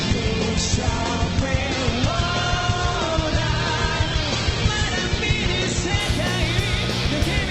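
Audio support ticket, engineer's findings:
Adaptive stream starting at a low bitrate, 0 to 6.0 s: nothing above 8.2 kHz, fits low-rate Opus. Spectrogram shows a flat ceiling, then a sudden upswitch at 6.0 s, no gap.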